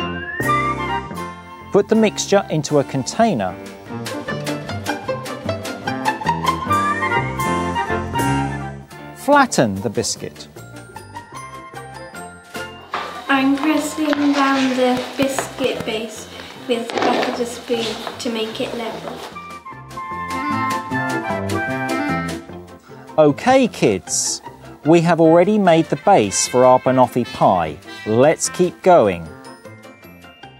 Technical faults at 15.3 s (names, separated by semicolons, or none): train of clicks